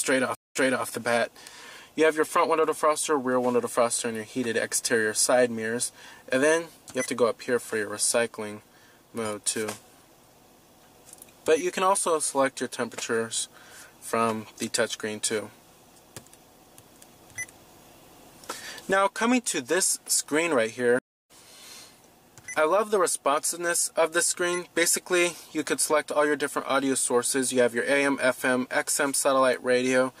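The audio has two stream reconnects. At 0.35 to 0.86 s it goes silent for 0.2 s, then resumes 0.3 s earlier, repeating material already heard, as when a server resends a burst after the player reconnects. At 20.99 to 21.31 s a 0.31 s silence is followed by a jump of roughly 0.3 s later, skipping material. That jump in position, backwards or forwards, distinguishes a reconnect with a fresh decoder from a simple dropout, which leaves the timeline intact.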